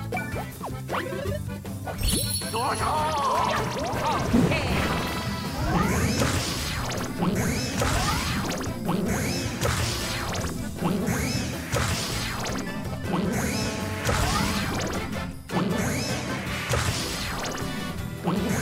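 A hard, raspy 217 Hz GSM phone buzz, about 9 dB below the audio, hits at 2.69–3.65 s and 13.54–14.61 s as a nearby 2G phone's transmit bursts are rectified.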